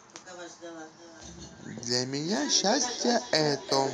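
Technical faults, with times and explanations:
0.87 s to the end, feedback echo between two devices: from here on, the speech keeps coming back at a steady gap of roughly 0.4 seconds, with the loudest return only about 10 dB under the direct sound. It sounds like two devices in the same room on one call. One plays what the other's mic sent, that mic hears it again, and neither echo canceller can remove sound from a loudspeaker that isn't its own.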